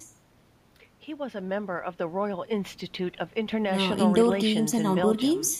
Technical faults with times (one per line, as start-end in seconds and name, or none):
0.96-5.60 sudden gain jump